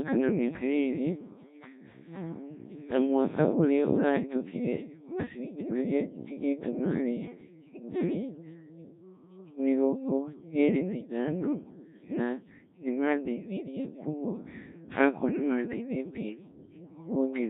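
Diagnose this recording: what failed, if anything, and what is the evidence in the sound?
Codec 2 vocoder damage runs through the whole speech clip, a failure at the codec stage. The voice is robotic and buzzy throughout, and its heavy degradation points to a very low rate near 1.3 kbit/s. The decoder does not reconstruct the original waveform. It rebuilds speech from sine waves using only transmitted pitch, voicing, energy and a coarse spectral envelope, so natural texture is lost and a synthetic, mechanical tone replaces it.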